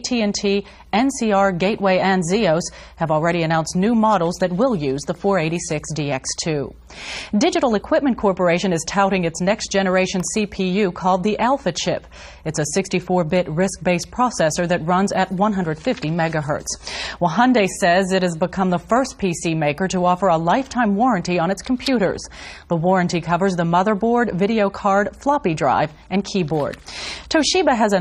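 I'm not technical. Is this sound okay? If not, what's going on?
Yes, it's fine: nothing in it sounds broken or glitchy, so there's nothing here you need to worry about.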